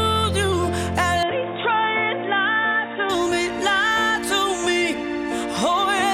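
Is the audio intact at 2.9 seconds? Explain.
No. At 2.9 s the audio is inside a stretch from 1.23 to 3.10 s where the input has likely switched to a poorer device. The band stops at about 3.8 kHz, so the sound turns dull and boxy, with a different tonal colour and its own noise floor sitting roughly 30 dB below the signal. The overall level stays about the same, and there is no gap at either transition, just an abrupt change in tone.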